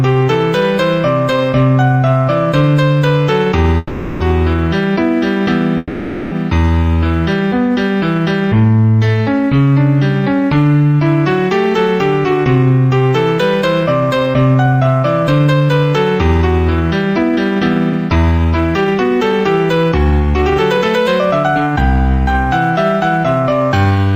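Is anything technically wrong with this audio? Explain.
Yes. There are two kinds of fault.

Call audio freezes occur from 3.77 to 4.22 s and from 5.78 to 6.34 s. The sound stalls, and the last moment is carried on as a fading buzz or hiss for 430 ms and then 540 ms. The likely cause is delayed packets that left the jitter buffer empty. When the audio resumes, it picks up exactly where it stopped. Nothing is lost; a gap has been inserted.

Jitter buffer speed-up follows, from 11.65 to 15.70 s, 16.42 to 21.75 s, and 23.11 to 24.13 s. Playback runs at 107, 108 and 109 percent. Pitch stays the same, but the sound feels hurried. The receiver is trimming short pitch-period slices to drain excess buffered delay. Around 300 ms, 400 ms and 100 ms are removed in each stretch.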